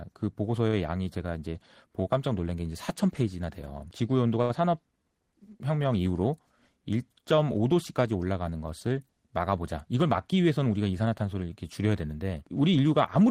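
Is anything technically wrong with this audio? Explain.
Yes, there are two faults in this speech.

From 4.42 to 4.52 s there is a short stall from a late packet. A packet arrived late, the jitter buffer ran dry, and the receiver stretched the last sound by 74 ms before resuming with nothing lost. It sounds like a held syllable. On a spectrogram the harmonics run flat and repetitive, and the waveform shows a repeated cycle pattern.

From 9.76 to 10.74 s there is a jitter buffer speed-up. The buffer had overfilled, so the receiver trimmed short pitch-period pieces again and again, removing roughly 70 ms. The speech runs at about 107% speed at unchanged pitch and sounds hurried. The spectrogram's syllables look compressed in time, and the waveform has small splices.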